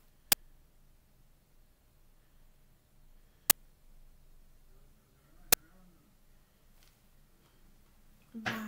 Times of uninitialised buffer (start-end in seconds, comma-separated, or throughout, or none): 0.32, 3.50, 5.53